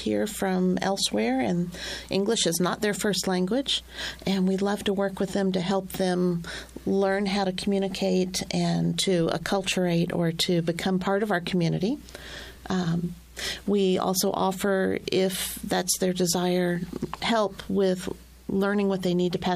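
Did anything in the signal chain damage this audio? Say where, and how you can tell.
No, nothing in the signal chain damaged this audio that I can hear.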